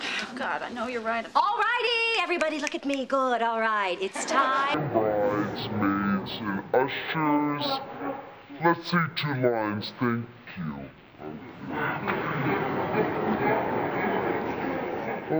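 From 4.74 s to the end, the audio abruptly drops to half speed and an octave lower, 12 semitones down, with everything sluggish and heavy, while a faint, mirrored copy of the sound appears in the top half of the spectrum. This is stereo read as mono. The left and right samples, stored alternately, are played back in sequence as one channel, so each frame of time takes twice as long, and the alternation between channels folds a reflected image upward.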